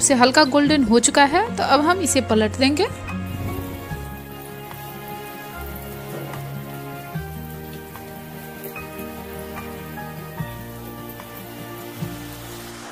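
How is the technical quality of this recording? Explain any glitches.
Nothing here gets in the way: there are no glitches to point to anywhere in the recording.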